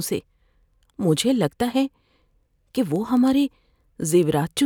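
From 0.21 s to the end, the receiving device runs on its own clock, drifting from the sender's by roughly 200 ppm, so one sample slips about ten times a second. The speech carries steady word clock ticks, around forty in all.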